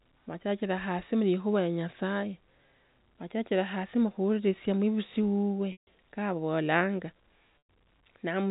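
Packets went missing twice in this speech clip, carried over a G.711 telephone path that band-limits it to below 4 kHz. That is packet loss with pitch repetition: the receiver bridged each gap by looping the last pitch period and fading it out. The first loss, at 5.72 to 5.86 s, covers about 150 ms, and the second, at 7.61 s, about 110 ms. Both are long enough for a brief buzzy hold to decay into silence before the speech cross-fades back in.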